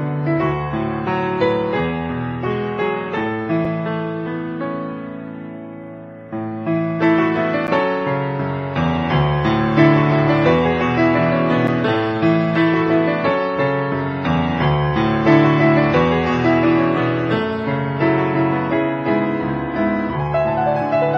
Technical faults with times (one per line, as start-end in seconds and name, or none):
3.65 gap between stream segments
7.67 gap between stream segments
11.67 gap between stream segments